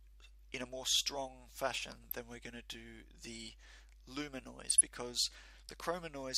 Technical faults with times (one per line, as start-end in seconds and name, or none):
2.04-2.14 DAB burbling
4.67-4.81 DAB burbling